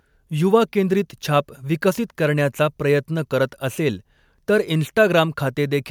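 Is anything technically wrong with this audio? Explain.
No, nothing technically wrong can be heard in this speech recording. No technical fault interrupts the signal at any point.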